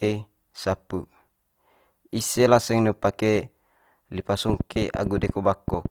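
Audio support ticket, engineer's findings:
Opus compression throughout, likely CELT mode at a rate fitting 24 kbps: starved bands folded or noise-filled, so speech is plainly grainy and rough. Bandwidth kept to about 20.3 kHz.

Train of clicks, 4.49 to 5.87 s, likely interference or a faulty connection or supply injecting pulses: roughly 15 similar pops, irregular, about 8.8 per second, about 10 dB above the speech.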